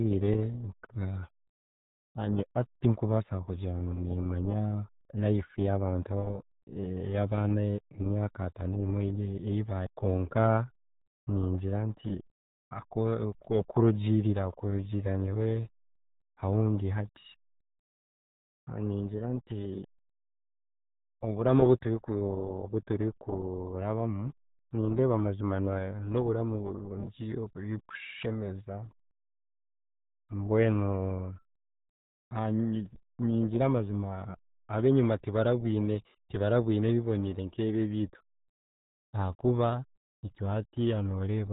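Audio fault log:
Throughout: RealAudio 14.4 codec, nothing above 3.8 kHz, speech muffled and gargly from heavy coding damage, consistent with an 8 kbit/s dial-up speech codec.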